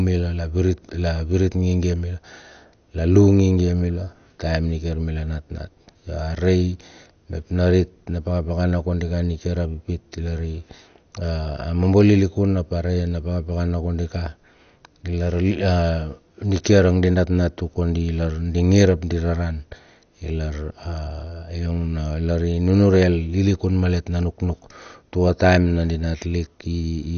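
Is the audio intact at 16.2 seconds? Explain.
No. MP2 compression runs throughout, including 16.2 s: the speech is dull, with nothing above 6.4 kHz and a gurgling, granular grit, likely from Layer II sub-bands starved of bits, fitting about 48 kbps.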